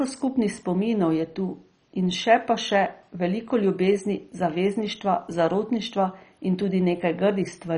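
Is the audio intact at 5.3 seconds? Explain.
No. At 5.3 seconds, as throughout the speech, the sound is dull, with nothing above about 10.3 kHz and a gurgling, granular texture. This is likely MP2 compression at a bitrate around 32 kbps, which switches off upper sub-bands and coarsely quantises the rest.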